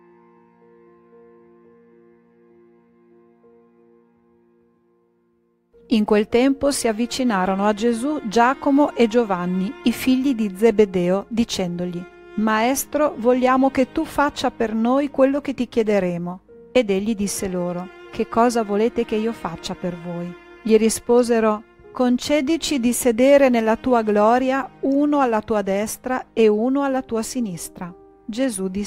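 Nothing goes wrong anywhere in the clip; there's no technical fault to point to.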